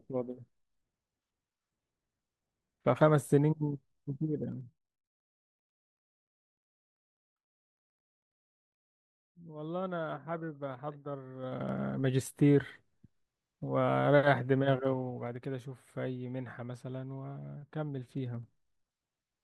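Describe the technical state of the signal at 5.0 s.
Zipper noise, 4.44 to 5.12 s: the level drops roughly 15 dB in unsmoothed 2 dB steps, about ten per second, each leaving a small audible click.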